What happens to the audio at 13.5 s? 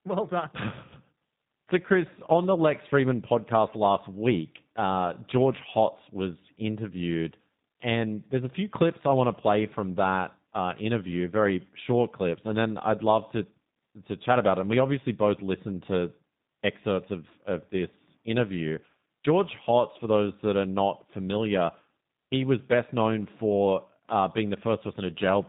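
At 13.5 s the speech sounds rough, buzzy and slightly synthetic, with nothing audible above about 3.8 kHz. This is G.729 codec damage, present throughout the clip, which fits an 8 kbit/s encoder rebuilding each 10 ms frame from a vocal tract filter, a pitch predictor and a few pulses.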